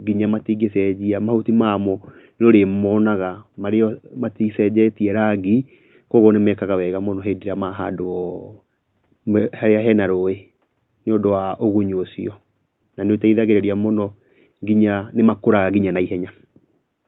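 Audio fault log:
No faults are heard in this speech clip. The room's background noise sits about 54 dB below the speech and belongs to the recording itself.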